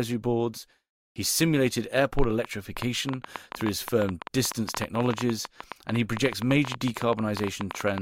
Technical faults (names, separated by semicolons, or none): train of clicks